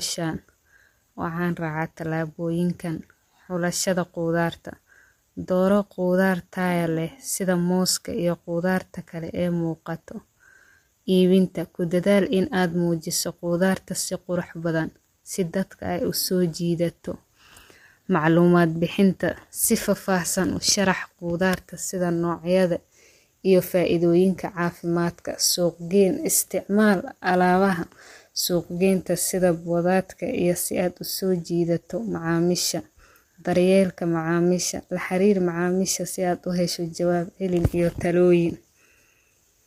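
From start to finish the speech carries plainly audible coding damage: a rough, grainy texture with a noisy haze filling the gaps between pitch harmonics. The likely cause is low-delay AAC compression of the AAC-ELD kind, whose very short frames resolve harmonics coarsely, at a rate that fits roughly 32 kbps. On a spectrogram the harmonic stripes look smeared and speckled, with noise between them, and all energy stops sharply at about 15.7 kHz.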